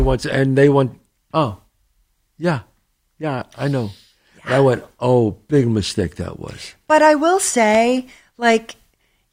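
No technical faults can be heard anywhere in the speech recording, and the signal stays steady and intact throughout.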